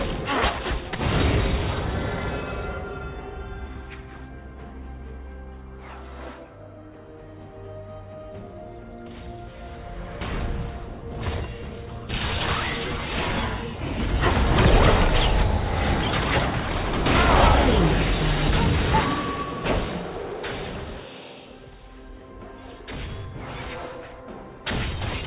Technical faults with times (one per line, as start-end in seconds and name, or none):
none